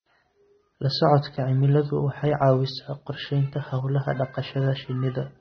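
From start to finish the speech carries AAC compression damage, plainly audible throughout. Nothing survives above about 6.3 kHz, so the top end is gone and the sound is dull. The coder has too few bits to spend per frame. It discards detail the hearing model judges least important. Sibilants turn smeared and fizzy, and sustained sounds warble. The damage fits a low bitrate near 24 kbps, likely from AAC-LC encoding.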